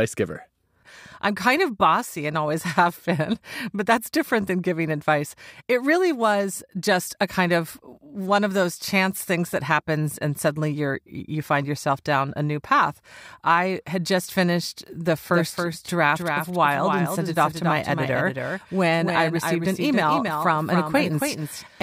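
From 15.30 s, right after "had just finished the", a doubled audio track runs to the end: a full-band copy trails by roughly 300 ms at about 5 dB lower. Unlike reverb, it has no decay or room colour. A second capture path is the likely cause.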